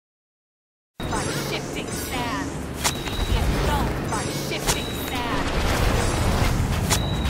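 Cut-off start, 0 to 1.00 s: the clip opens on digital silence, and the sound cuts in abruptly at 1.00 s, already under way. There is no attack or fade-in, because capture or streaming began late and the first material heard is the middle of something. Whatever preceded it was never recorded, so the entry point is an instantaneous jump from nothing into the sound.

Frames out of order, 2.95 to 3.30 s: two adjacent blocks of audio, each about 171 ms long, play in swapped order, which fits runs of four frames delivered and decoded the wrong way round. The later block sounds first, then the earlier one, giving a garbled, fluttering stretch. Nothing is lost; the material is only rearranged.

Processor overload crackle, 3.80 to 4.19 s: a short burst of gritty crackle rides on top of the sound. The processor fell behind, missing the deadline for about ten very short buffers of under a millisecond each. 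Every miss replayed a fragment of stale audio with hard edges, and the run of these discontinuities reads as tearing grit until the load eases at 4.19 s.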